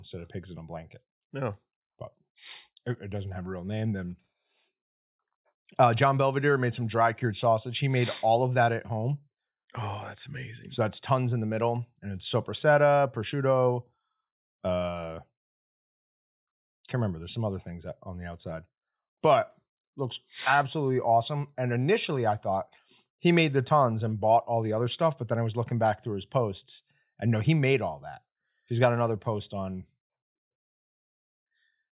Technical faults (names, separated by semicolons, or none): none